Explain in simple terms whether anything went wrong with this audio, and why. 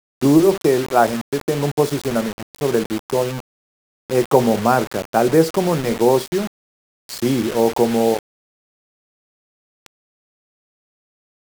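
Throughout the clip, the speech has a grainy, rough edge that shifts as the voice moves, and the quietest moments crackle or drop to silence instead of fading smoothly. The likely cause is low bit depth without dither: the sound fits about 5 bits, with each sample rounded to a coarse step, so the error follows the speech.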